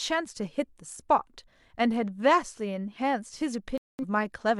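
At 3.78 s the speech cuts to silence until 4.04 s. This is a digital broadcast dropout: the receiver muted after losing valid frames, so about 0.21 s of programme is simply gone. The waveform drops flat, and the spectrogram shows a clean vertical gap across every frequency.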